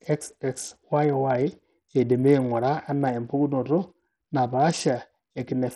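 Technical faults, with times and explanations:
Throughout, Bluetooth SBC compression: the speech is heavily damaged, with treble flickering in and out under a gritty, aliased noise. This is likely SBC starving its top sub-bands, which fits a 64 kbps stream. Unlike MP3 swirl, the grit is harsh rather than watery.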